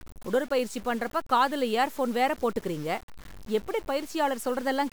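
From start to finish the speech carries a grainy, buzzing distortion that rises and falls with the voice. This points to low bit depth without dither, likely a signal truncated to around 6 bits. Because the rounding error tracks the waveform, quiet tails turn gritty and sputter or drop to silence, with the error only about 20 dB under the signal. A waveform shows visible stair-steps, and a spectrogram shows broadband hash that follows the speech and vanishes in pauses.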